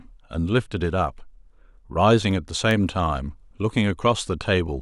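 A speech clip with CD scratch ticks: three brief clicks between 2.31 and 2.71 s, each under a millisecond, repeating once per disc revolution as a blemish defeats error correction. A spectrogram shows thin vertical broadband lines; the waveform shows tiny spikes or flattened gaps.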